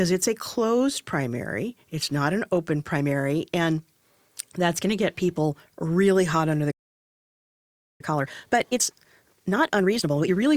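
Right after "really hot under the", at 6.71 s, the speech cuts to dead silence in mid-flow and stays silent until 8.01 s, a gap of about 1.3 s, before picking up where it broke off. This is a playback stall. The player most likely ran short of incoming data or had its output thread held up, so nothing reached the output until it recovered.

From 8.01 s to 10.47 s the speech sounds hurried, running at about 1.5 times normal speed, yet its pitch stays natural. This is time-compressed catch-up. Having fallen behind during the stall, the player works through its backlog by dropping short slices of audio and cross-fading the joins, which shortens the timeline without raising the pitch.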